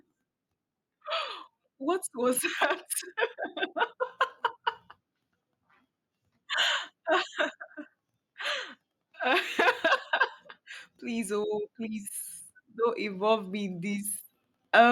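Speech, with automatic gain rising from 12.74 to 14.16 s, just after "oh please": the gain control judges the input too quiet and lifts it by about 4 dB. Because background noise swells along with the voice over 1.4 s, it isn't simply louder talking.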